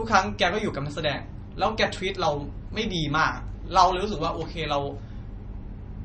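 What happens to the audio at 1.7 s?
At 1.7 s the speech sounds watery and swirly, as it does throughout, with nothing above 8.3 kHz. This is likely MP3 compression at a low bitrate, around 32 kbps.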